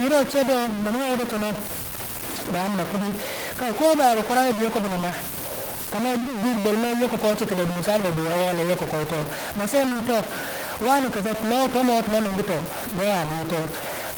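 From start to finish, the speech carries a distortion, and the pauses fill with noise instead of falling silent. The likely cause is a stuck bit: one data bit held fixed, so about half the sample values land wrong.

At 9.85, 9.89 and 9.93 seconds come three back-to-back short concealed packet losses, ending at 9.97 seconds. Each lost about 20 ms of audio. The receiver patched 15 to 20 ms by extending the preceding sound, heard as a brief smear or wobble.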